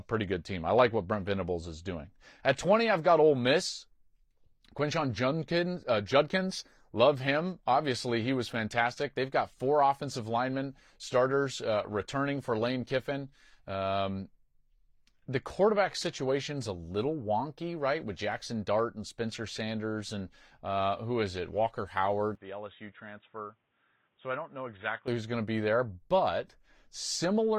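From 22.35 s to 25.08 s the recording likely switched to a poorer input device, such as another microphone or a headset's call profile, and then switched back. The speech turns dull and boxy at once, drops about 10 dB in level, and carries faint new background noise roughly 40 dB below it. There is no gap at either switch, and the full, brighter sound returns abruptly at 25.08 s.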